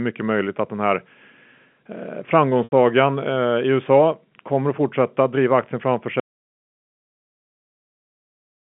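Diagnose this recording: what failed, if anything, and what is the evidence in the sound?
Packet loss with pitch repetition hits the network side at 2.64 s, running to 2.72 s. For about 80 ms the receiver kept replaying the last pitch period to paper over the hole, and 80 ms fits four 20 ms packets going missing. The gap outlasts the roughly 50 ms fade, so the repeated period fades into silence before the speech returns with a short cross-fade.

Then there's an audio dropout to silence from 6.2 s right through to the end. The sound stops mid-flow and what follows is silence, no room tone, no line hiss, nothing. That points upstream of the G.711 telephone coding, which is still carrying the 150 Hz to 3.4 kHz line band cleanly up to that point. The likely cause is the input going away, a disconnected device, a dropped link or a mute, while the encoder kept writing silence.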